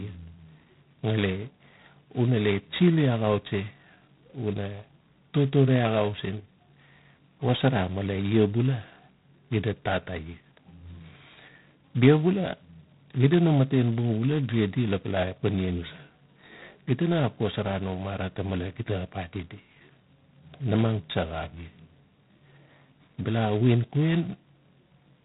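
A harsh, rasping hiss rides on the speech from start to finish, swelling as the talker gets louder and falling back in quieter moments, while the sound stays muffled with nothing above 3.8 kHz. This is G.726 ADPCM coding at heavy damage, which fits 16 kbit/s: with so few bits per sample left to code the difference from the predicted waveform, the quantisation error becomes a coarse, level-tracking noise.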